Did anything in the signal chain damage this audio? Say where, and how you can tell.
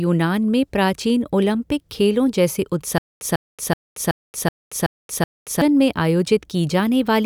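Yes, at playback: stutter with silent gaps from 2.98 to 5.62 s, a 148 ms fragment replaying every 376 ms between silences, likely a stalled stream retrying.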